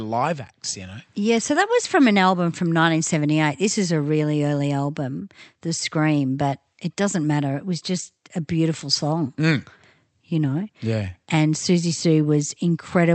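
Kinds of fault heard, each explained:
No kinds of fault are heard in this speech clip.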